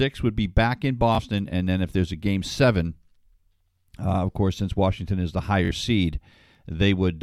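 Bluetooth stutter hits at 1.15 to 1.19 s, after "would be back in", and at 5.65 to 5.71 s, after "is the". The receiver replays its last slice while data is missing, giving a brief repeat. The gaps of about 21 and 43 ms fit one and two lost packets.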